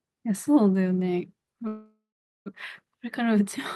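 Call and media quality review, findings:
Speech stalls into a fading buzz at 1.67 s, then 0.44 s silence; resumes intact at 2.48 s, 0.79 s late. Call audio freeze, likely jitter buffer underrun.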